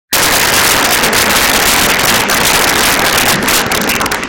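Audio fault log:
Throughout, integer overflow: the gain runs about 16 dB too hot, so on roughly one sample in fourteen the values wrap past the integer ceiling and flip to the opposite extreme instead of holding, which is why the loud moments crack violently rather than just clipping.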